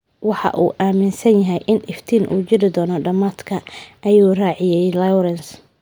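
No technical faults can be heard in the recording.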